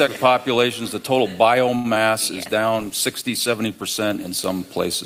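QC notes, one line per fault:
1.75–1.86 s, short stall from a late packet: a packet arrived late, the jitter buffer ran dry, and the last sound was held about 90 ms before resuming where it stopped.
1.94–1.98 s, short concealed packet loss: about 20 ms never reached the decoder, so it was patched by extending the preceding sound, leaving a brief smear or wobble.
2.37–4.46 s, call bitrate drop: the encoder fell from 64 to 17 kbps for about 2 s, coding coarsely and trimming high frequencies, so the sound turns rough and muffled.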